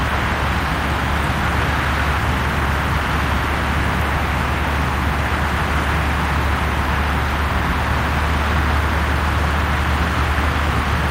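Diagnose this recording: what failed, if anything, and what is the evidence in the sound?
Nothing in this recording of everyday sounds points to a failure anywhere in the chain. No stage of the path leaves any audible trace that would call for a diagnosis.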